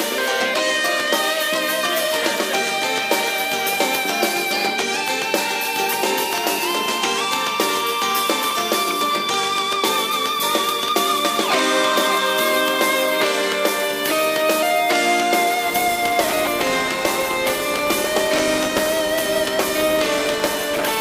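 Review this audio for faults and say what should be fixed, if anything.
From 15.66 s to the end, a filter restarted on every block: it discards its stored state at each block boundary and starts from silence, so each 10 ms block opens with a small transient. This produces a 100 Hz buzz that tracks the signal's level. Keep the filter's state between blocks instead of resetting it on each call.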